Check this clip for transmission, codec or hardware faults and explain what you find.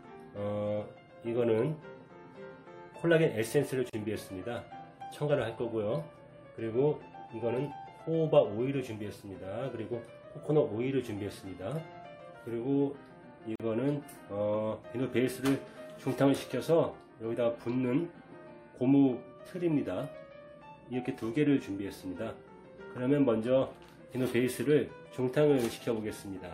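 Two gaps at a join of encoded pieces sit in the clip, at 3.90 s and 13.56 s. The audio was encoded in separate segments and spliced without trimming, so each encoder's leading delay and last-frame padding survive as dead air. The sound drops out for about 36 ms at 3.90 s and about 43 ms at 13.56 s, each gap having its edges smeared by the codec, before continuing exactly where it left off.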